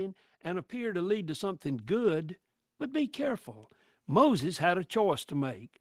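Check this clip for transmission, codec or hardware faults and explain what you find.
There is one fault: automatic gain rising. From 0.42 s to 2.35 s the speech and the background noise behind it swell together, climbing by about 8 dB over nearly two seconds and levelling off just before "but be careful". The automatic gain control judged the input too quiet and raised its gain step by step. Because it amplifies everything arriving at the input, the background noise lifts along with the voice instead of staying put.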